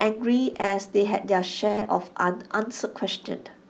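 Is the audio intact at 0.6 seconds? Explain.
No. At 0.6 s the sound sits inside a stretch of repeated packet loss (robotic sound) running from 0.53 to 0.69 s. Four short holes, the longest about 20 ms, fall in quick succession. Each is patched by extending the preceding sound, so roughly half of that span is concealment rather than real signal, about 80 ms in all. The result is choppy audio with pieces missing, heard through an Opus call path that fits an 8 kHz bandwidth.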